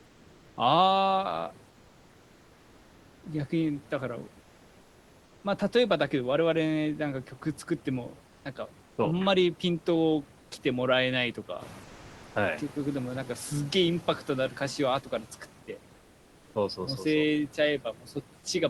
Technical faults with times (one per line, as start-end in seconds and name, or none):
0.00-18.69 noise suppressor artifacts
0.00-0.57 comfort noise in place of the background
1.69-3.23 comfort noise in place of the background
4.41-5.43 comfort noise in place of the background
8.27-8.97 comfort noise in place of the background
10.41-10.51 comfort noise in place of the background
11.60-15.02 noise suppressor catching up
11.83-12.35 comfort noise in place of the background
15.95-16.55 comfort noise in place of the background
17.79-18.17 speech cut by the noise suppressor